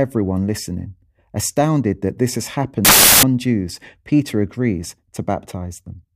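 At 2.85 s, just after "that this has", the speech gives way to loud, harsh broadband noise until 3.23 s. This is samples built from the wrong bytes: the reader misassembled each sample's bytes, so the fast-changing low bits became the dominant part of every value.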